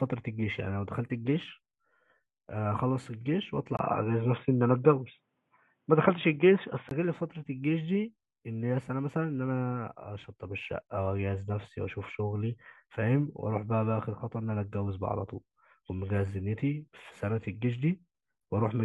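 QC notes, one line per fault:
3.77–6.91 s, input switched to a poorer device: the speech abruptly turns dull and boxy, with nothing above 3.8 kHz, a brief gap of about 20 ms at the changeover, a level shift of around 5 dB, and a faint new noise floor sitting roughly 50 dB under the signal. The likely cause is the system dropping to a different microphone or a headset's narrowband call profile, whose restricted bandwidth and own gain and noise produce this sudden change in tone until the original input returns at 6.91 s.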